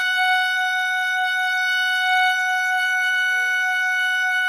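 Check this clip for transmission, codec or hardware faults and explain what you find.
One codec fault runs through the whole music clip, and its likely cause is Opus compression. From start to finish, tones sound rough, grainy and noisy rather than clean. The bandwidth stays full, extending to about 20.1 kHz, so nothing is muffled. That texture fits Opus in its music (CELT) mode at a low rate near 24 kbps. Short of bits, the encoder keeps each band's energy but fills the fine detail with folded or noise-like content, and that detail loss is plainly audible here.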